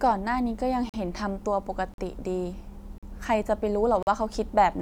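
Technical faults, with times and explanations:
0.89–4.07 s, gap between chunks: the speech drops out cleanly four times, at 0.89–0.94, 1.94–1.98, 2.98–3.03 and 4.03–4.07 s, each hole about 44 ms long. They land like clockwork, one per second, so the audio was clearly handled in 1-second chunks with dead air slipped in at every join, probably padding or a late start on each chunk. Nothing gets dropped, though. Everything after each join just arrives a little later, which gives that choppy, stop-start feel.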